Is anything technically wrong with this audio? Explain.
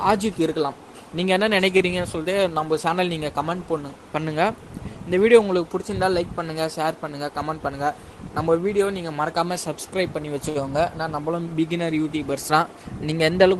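Yes, there are two short stalls from late packets and one jitter buffer speed-up.

Short stall from a late packet at 1.77–1.82 s and 10.49–10.57 s: the jitter buffer ran dry, so the receiver held the last sound for 26 ms and then 59 ms until the packet arrived. The sound briefly drags with a faint buzz or dip. Unlike a dropout, nothing is skipped.

Jitter buffer speed-up at 7.43–7.71 s: the receiver trimmed pitch-period pieces, around 40 ms in total, to reduce the excess buffered delay. The audio runs at 111% speed with unchanged pitch and sounds hurried, the opposite of a stall's stretching.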